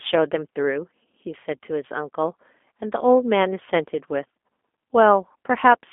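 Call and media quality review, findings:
G.729 codec, whole clip: speech coded at a rate that fits 8 kbit/s G.729A, rebuilt from filter, pitch and pulse parameters. Band roughly 250 Hz to 3.5 kHz, nothing above 3.7 kHz; plainly audible roughness, slightly synthetic timbre.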